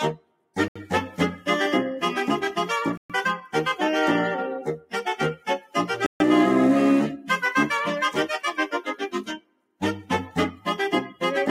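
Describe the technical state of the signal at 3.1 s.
Right at 3.1 s the audio is just coming back from a dropout that started at 2.97 s, about 0.12 s of dead silence before it resumes. That's likely a Bluetooth stall, where the headphones' buffer ran dry while delayed packets were resent. Underneath it, a speech noise suppressor is left on throughout, pulling held tones and tails down by roughly ten decibels, so the sound pumps and thins.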